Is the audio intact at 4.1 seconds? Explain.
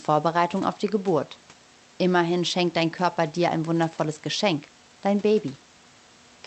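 Yes, the audio is intact at 4.1 seconds, with no fault at that moment.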